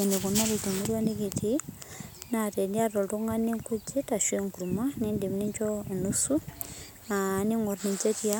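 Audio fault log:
Nothing stood out on listening to this speech.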